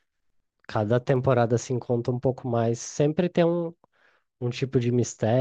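Clock drift buffer slips from 0.30 to 4.58 s: regular clicks every 0.855 s in the speech, likely from two clocks about 200 ppm apart dropping or repeating a few samples.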